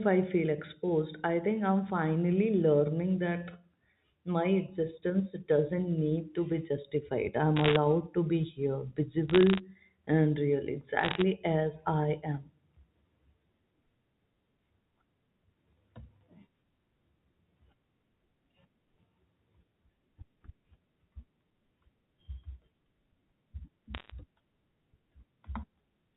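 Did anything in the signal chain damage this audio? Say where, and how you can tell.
Yes, bit errors on a digital phone line, at the transmission stage: bursts of sharp ticks and crackle at 7.57–7.76, 9.30–9.60, 10.99–11.22 and 23.94–24.11 s. Each flipped bit corrupts a single mu-law sample, at a rate well under one percent. Unlike packet loss, the speech underneath continues unbroken, with no gaps.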